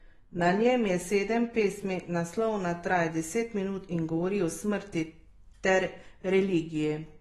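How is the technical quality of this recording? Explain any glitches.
The recording is noticeably degraded by AAC compression across its whole length. The likely cause is a low-bitrate AAC-LC encode, consistent with roughly 32 kbps. To save data, the encoder quantised the spectrum coarsely against a hearing model and discarded everything above 12.1 kHz. The speech therefore sounds dull and lacks air. The coarse quantisation of each frame adds a smeared, fizzy texture that is plainly audible, especially on sibilants.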